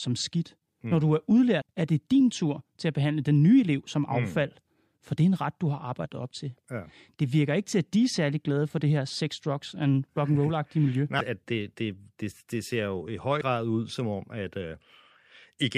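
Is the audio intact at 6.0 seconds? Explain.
No. Between 6.04 and 6.06 s the speech carries damaged data in a compressed stream: corrupted bytes make the decoder misread those frames and lose sync while it hunts for the next frame header, producing a brief chirp or squawk-like blip.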